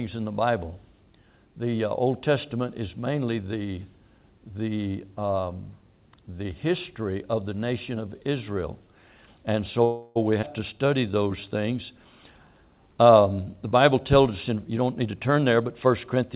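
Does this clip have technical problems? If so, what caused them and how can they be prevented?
Yes. Four faults can be heard, against a band-limited call sound with nothing above 4 kHz, which fits a G.711 mu-law link at 64 kbps.

Call audio freeze, 9.84 to 10.18 s: For about 0.31 s the last sound is stretched into a fading buzz, and then the audio resumes exactly where it stopped. Nothing is lost, and the timeline is pushed back by 314 ms. The likely cause is packets held up in transit until the jitter buffer ran dry. This differs from a skip because material is inserted rather than removed. A larger jitter buffer target or a more stable network path would absorb a stall of this length.

Skip ahead, 10.42 to 10.44 s: Playback jumps forward with only a 9 ms join, and roughly a tenth of a second of audio is gone. A stretch of audio was dropped, in transit or by an overflowing buffer, while later audio was already waiting. 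Unlike the freeze, there is no filler, just an abrupt splice between two sides that don't belong together. Letting the buffer shrink gradually by time-stretching, instead of dropping a chunk, would prevent it.

Jitter buffer slow-down, 10.73 to 11.50 s: The audio runs at 89% speed with its pitch unchanged. Repeated pitch periods add 90 ms and give sounds a drawn-out quality. The buffer was running low or had raised its target delay, and was building up a reserve. This is spread smoothly over 0.77 s, whereas a freeze is one held sound. A steadier buffer target that doesn't swing between overfull and underfull would avoid it.

Jitter buffer speed-up, 13.93 to 16.23 s: The audio runs at 107% speed with its pitch intact and sounds hurried. Cutting short pieces of pitch periods removes roughly a fifth of a second in total. The buffer held more than its target and was trimming the excess. This is the opposite of the slow-down: nothing is stretched, only compressed. 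Smoother packet delivery, so audio doesn't arrive in bursts, would keep the buffer near its target.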